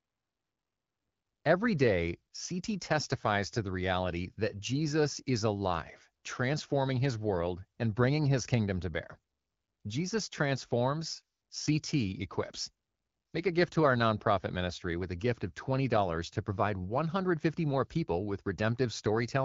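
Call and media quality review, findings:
Findings: none; the speech comes through the AMR wideband (HD Voice) codec at 12.65 kbit/s with only light coding.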